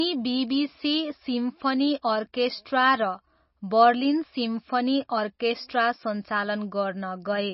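Throughout this speech clip there is heavy MP3 compression damage. Nothing is heard above about 5.6 kHz, a hard fixed cutoff rather than a gentle rolloff. Weak frequency components flicker between frames, giving a watery, swirly texture that sets it apart from plain low-pass filtering, likely from a very low bitrate around 24 kbps.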